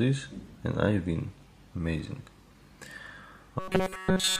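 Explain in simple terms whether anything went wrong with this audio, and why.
From 3.59 s to the end at 4.39 s, the sound turns into a flat, metallic buzz. This is robotic sound from repeated short buffers. New audio likely stopped arriving in time, so tiny slices about 5 ms long were repeated throughout, creating a steady 188 Hz drone.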